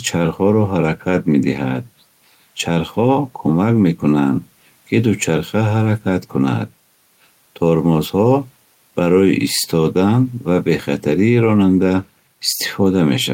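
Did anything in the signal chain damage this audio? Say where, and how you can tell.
No, nothing in the signal chain has audibly damaged this speech recording. No stage, from capture through to playback, leaves a trace that a careful listen can pick out.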